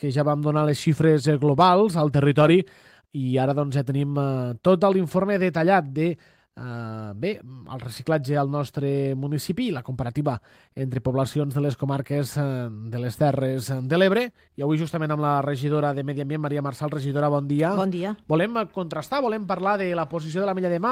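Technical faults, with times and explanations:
No technical faults are audible.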